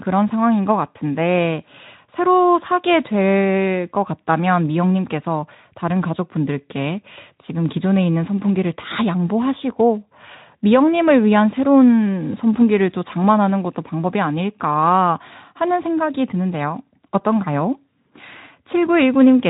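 No technical faults are audible anywhere in this speech.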